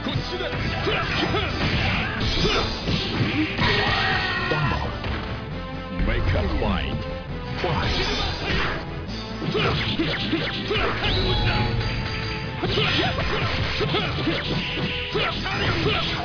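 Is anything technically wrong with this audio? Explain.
No, there is no technical fault.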